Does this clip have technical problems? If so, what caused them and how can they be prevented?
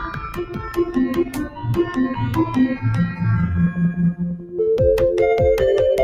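Yes. A noise suppressor applied to music stays active throughout, treating sustained tones and decay as noise, so the level pumps by roughly 10 dB. Bypass speech-oriented suppression for music.

Sound is cut by the noise suppressor at 0.00–0.81 s, 1.22–1.67 s and 4.36–4.56 s, where held material sinks by up to about 11 dB. Disable suppression or set a music mode before recording.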